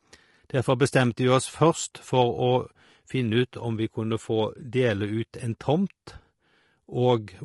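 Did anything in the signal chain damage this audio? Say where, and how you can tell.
Yes, at the codec stage, across the whole speech clip. The voice sounds rough and grainy from start to finish, with noise filling the gaps between pitch harmonics and a thin, synthetic-sounding top band. This is likely low-delay AAC compression (AAC-ELD). Its short frames cannot resolve harmonics finely, and the damage level fits a bitrate of about 32 kbps. Because the graininess is constant rather than bursty, it points away from network loss.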